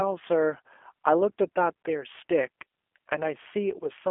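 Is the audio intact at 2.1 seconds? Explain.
No. G.729 codec damage runs through the whole clip: speech rebuilt from a vocal-tract model and sparse pulses, which fits 8 kbit/s, sounds rough and synthetic, with nothing above 3.6 kHz.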